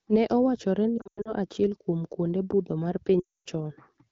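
From 0.97 to 1.35 s, just before "achiel kuom kwonde budho", lost AMR speech frames break up the speech: about 200 ms of frames fail over a 280 ms stretch, the longest gap 100 ms. The decoder repeats the last good pitch and vocal tract settings at falling gain, so the sound warbles and dips, then fades. After "kuom kwonde budho mar", 3.20 to 3.49 s loses 260 ms of frames that smear quickly into silence. The surrounding wideband sound is clear, which fits a 12.65 kbit/s AMR-WB rate.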